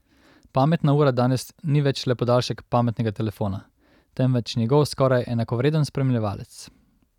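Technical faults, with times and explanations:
No technical faults can be heard anywhere in the speech recording.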